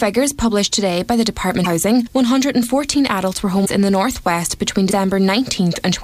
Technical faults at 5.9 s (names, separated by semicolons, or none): none